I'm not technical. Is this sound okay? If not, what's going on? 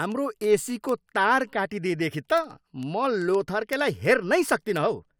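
No. Word clock ticks run through the speech from 0.12 s to 5.15 s, a sharp tick roughly every 0.07 s. Two digital devices run on slightly mismatched clocks, off by around 300 parts per million, so single samples keep getting dropped or repeated.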